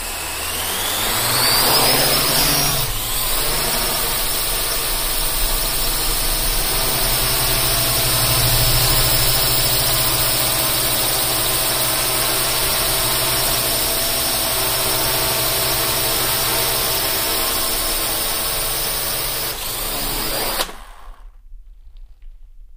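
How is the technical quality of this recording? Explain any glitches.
No glitches turn up anywhere in this recording, so there's nothing here that needs explaining.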